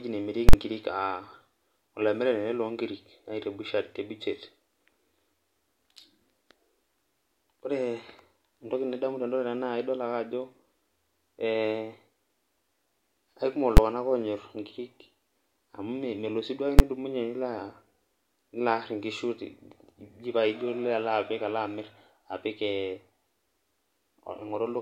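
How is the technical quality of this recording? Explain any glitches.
The speech recording is marred by three loud digital bursts from invalid numbers at full scale. At 0.49 to 0.53 s, a 46 ms block, which fits a 2048-sample buffer, was pinned to one extreme value after a calculation went invalid. It is heard as two sharp pops with nothing between. Single bangs follow at 13.77 s and 16.79 s, from blocks of about 12 ms that fit 512-sample buffers. On a waveform each shows as a flat slab far beyond the speech peaks. On a spectrogram each shows as vertical broadband lines.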